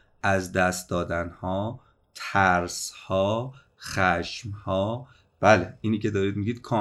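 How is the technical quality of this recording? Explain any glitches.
No glitches or technical faults can be heard anywhere here.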